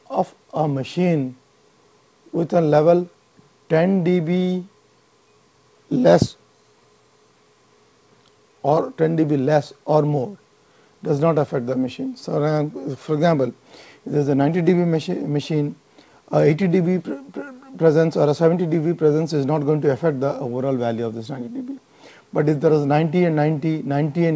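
No technical faults can be heard in this call audio.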